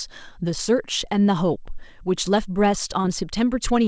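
A speech recording with a brief smear and wobble at 3.02 to 3.06 s, where the sound seems to hang for an instant before the real audio resumes. That is short concealed packet loss. About 20 ms of audio failed to reach the decoder in time, and the receiver covered the gap by extending the preceding sound for roughly the same length, then blending back into the real signal. The audio is also band-limited with nothing above 8 kHz, which fits a wideband G.722 call path.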